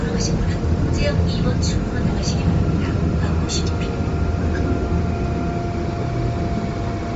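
Bluetooth LC3 compression, the likely cause, affects these sounds throughout. Nothing is left above 7.7 kHz, and the top of the band has a plainly audible grainy, breathy texture where spectrum was zeroed and refilled with noise. This fits roughly 32 kbps LC3 with 10 ms frames.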